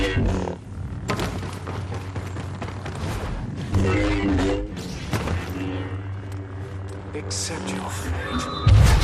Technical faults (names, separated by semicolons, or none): MP2 compression; DAB burbling